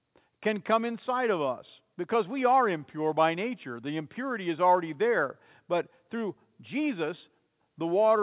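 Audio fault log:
No fault found in the speech audio.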